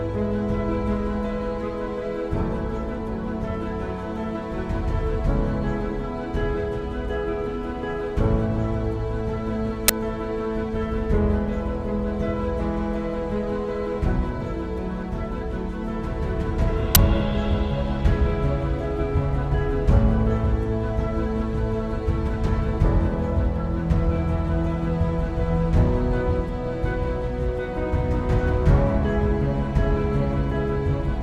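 At 9.88 s and again at 16.95 s, a sudden, loud burst of digital noise lasts about 10.7 ms, which fits a 512-sample buffer played before audio was written into it. This uninitialised buffer is a full block of harsh noise, unlike a silent dropout or a single-sample click.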